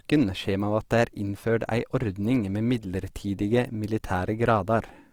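Throughout the speech, tones sound grainy, rough and noisy, with upper bands filled in. The likely cause is Opus compression, pointing to a low 24 kbps rate.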